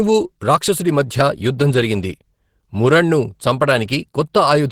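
Throughout the speech, the sound is muffled, hoarse and grainy, with plainly audible coding damage. The likely cause is Opus compression at a low rate, fitting roughly 16 kbps in hybrid mode, where bands are filled with noise rather than kept intact.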